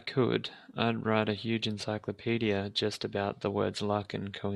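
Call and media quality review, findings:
Nothing stood out on listening to this speech clip.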